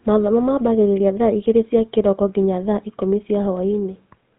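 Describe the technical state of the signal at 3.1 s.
At 3.1 s the speech is passing through a GSM full-rate codec, present across the whole clip. The coder models the vocal tract as a filter and excites it with a sparse train of regularly spaced pulses, discarding most of the residual detail, a reduction that fits a 13 kbps stream. Nothing above 4 kHz survives, so the sound is muffled and narrowband, and the pulse-driven excitation lends it a plainly audible buzzy, gravelly roughness.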